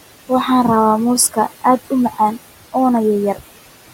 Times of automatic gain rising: none

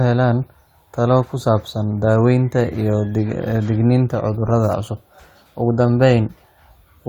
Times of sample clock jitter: none

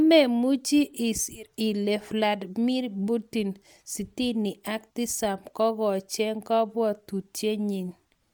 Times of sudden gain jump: none

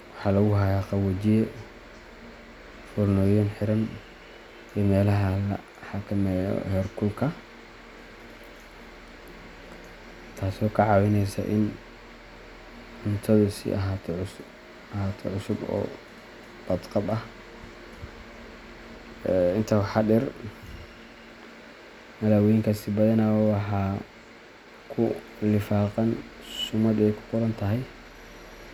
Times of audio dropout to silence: none

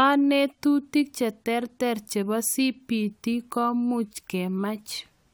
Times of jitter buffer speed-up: none

